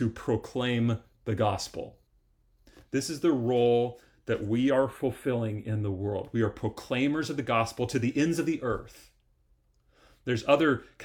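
A speech clip with channel delay (comb filtering) from 4.7 to 5.99 s, just after "the role that we". One channel lags by a few samples, roughly a tenth of a millisecond, so the mono sum cancels near 5 kHz. That gives fixed, evenly spaced notches rather than the smooth high-frequency loss of a low-pass dullness.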